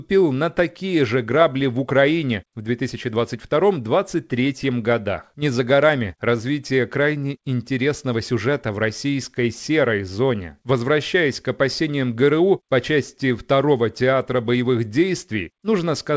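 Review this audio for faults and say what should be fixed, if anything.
Small hiccups and a faintly unsteady tempo recur at uneven intervals from start to finish. This is clock drift between sender and receiver: the sender's clock runs roughly 4 percent fast, so the jitter buffer keeps overfilling and must shed audio to keep up. Locking both ends to a common clock reference, or letting the receiver resample continuously to match the measured rate, would prevent this.

From 0.04 s to 16.10 s the speech is nudged along by repeated timing corrections. The receiver trims short pieces, always in the same direction and at irregular spacing, which averages out to playback at 104 percent and produces the slight stumbles heard throughout. Replacing these discrete cuts with smooth sample-rate conversion, driven by the buffer's fill level, would prevent the audible edits.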